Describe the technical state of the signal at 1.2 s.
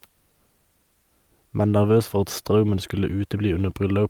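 At 1.2 s the speech signal is intact, with no fault present at that moment.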